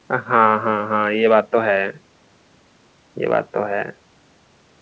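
Nothing stood out on listening to this speech, which comes through a G.722 call path at 64 kbps with nothing heard above 8 kHz.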